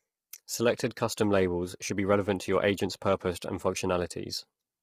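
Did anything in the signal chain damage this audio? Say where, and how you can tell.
Yes, at the codec stage. The speech sounds rough and grainy throughout, with noise between harmonics and a dull top. This likely points to heavy low-delay AAC compression near 24 kbps.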